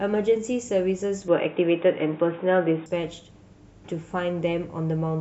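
The recording input most likely switched to a poorer device, moving from 1.28 s to 2.86 s onto another microphone or a headset's call profile before switching back. In this speech clip, everything above 3.8 kHz vanishes during that stretch, so the voice turns dull and boxy. The level shifts by around 5 dB, and a new background noise sits roughly 30 dB under the speech. Both changes arrive abruptly, with no gap at either switch.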